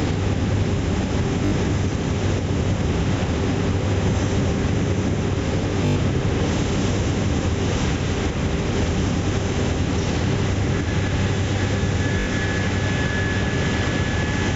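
At 1.46 s the audio breaks into a Bluetooth stutter lasting about 61 ms, to 1.52 s. Packets arrived late or not at all. The receiver kept replaying its last short slice, so a brief buzzing repeat replaces the sound. Playback then resumes further on, as if it had kept going. The same fault returns from 5.86 to 5.96 s, about 102 ms, the longest gap. It comes back once more from 12.20 to 12.27 s, about 61 ms.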